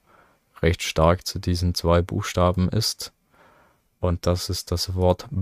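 Nothing stood out as a technical problem on listening to the audio.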